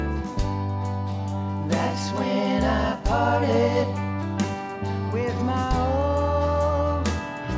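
No technical faults can be heard anywhere in the audio.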